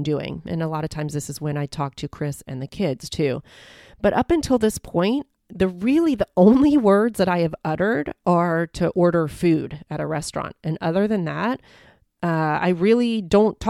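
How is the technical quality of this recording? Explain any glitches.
The technical quality of this recording is sound, with no glitches to explain.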